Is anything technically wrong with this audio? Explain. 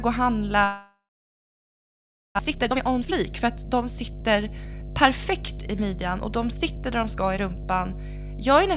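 Yes, three faults stand out in this speech clip.

Mains hum runs throughout. A ground loop or nearby transformer has let the 50 Hz power line leak into the signal path, so a steady low tone with some low harmonics sits under everything at about 10 dB below the speech. It never lets up, which makes it most obvious in the gaps and quiet passages, where it is all that remains.

A long network dropout runs from 0.64 to 2.41 s, likely caused by packets failing to arrive for a long stretch. The receiver filled the gap by extending the last sound into a buzz that fades away, and most of the interval ends up as silence. When the audio resumes, about a second of the speech is simply gone.

Jitter buffer speed-up follows from 2.44 to 7.91 s. After the outage, delayed audio arrived in a bunch, and the buffer held far more than it aims for. The receiver cut that backlog by repeatedly removing tiny pitch-period slices, taking out roughly 0.7 s in total. 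Speech plays about 13% fast at unchanged pitch, so it sounds hurried.

The call path itself, a narrowband telephone codec, leaves nothing above 4 kHz.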